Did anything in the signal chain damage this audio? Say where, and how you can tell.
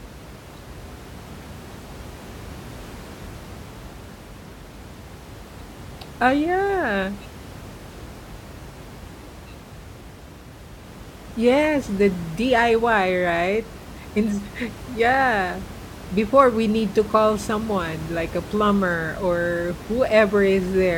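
No, nothing in the chain has harmed this speech, and the only thing underneath it is the room's own background noise sitting about 17 dB below the talking, which belongs to the recording space rather than to any stage of the system.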